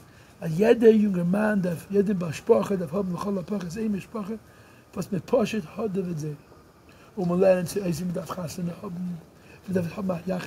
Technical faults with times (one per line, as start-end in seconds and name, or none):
none